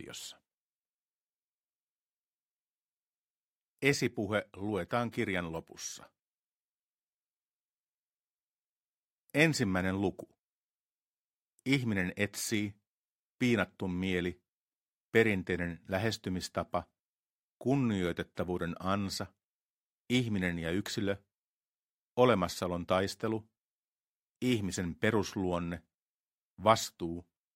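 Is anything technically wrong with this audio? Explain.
No, nothing technically wrong stood out on listening to this audio.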